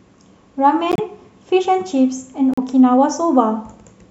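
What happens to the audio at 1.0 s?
Right around there, from 0.92 to 1.00 s, you get a corrupt frame decoded: a short run of compressed data, about three frames' worth, arrived with flipped bits, and the decoder played it anyway. The misread gains and codes throw energy into the wrong frequencies for those roughly 84 ms, so the speech gives way to a sharp, chirpy burst of noise that peaks fairly hot, up near -5 dBFS.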